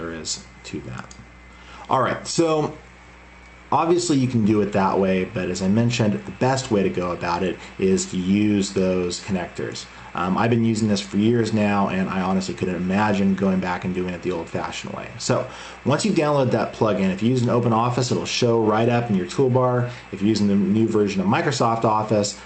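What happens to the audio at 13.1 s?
Nothing goes wrong at 13.1 s; the audio passes through intact there, carrying only the steady band limit around 8 kHz from the call path.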